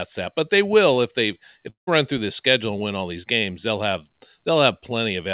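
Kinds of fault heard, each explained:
Clock slip clicks: Two devices were likely running on separate, unsynchronised clocks, off by around 50 ppm, so single samples get dropped or repeated. From about 0.17 s to the end, this produces faint regular ticks roughly every half second, clearest during louder stretches.
Long network dropout: Audio likely stopped arriving for a stretch around 1.70 to 1.89 s. The receiver bridges the gap with a fading buzzy continuation of the last sound, which gives way to quiet. Sound then resumes with about 180 ms missing.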